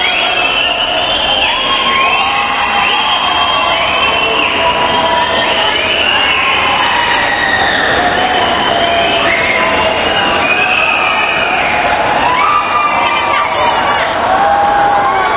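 Gain pumping runs throughout: the level is pulled down on every loud sound, with a gain swing of around 10 dB, squashing loud and soft parts closer together, likely from input gain set too high feeding a fast limiter. The audio reaches no higher than 4 kHz, which fits a narrowband telephone codec.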